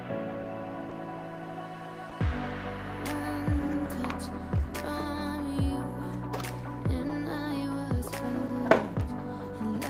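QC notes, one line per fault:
0.89–0.93 s, 2.09–2.13 s, 7.07–7.11 s, 8.47–8.51 s, short concealed packet loss: each time about 20 ms of audio arrived too late to decode. The receiver synthesised a 20 ms stand-in by extending the preceding sound, then blended back, leaving a brief smear or wobble.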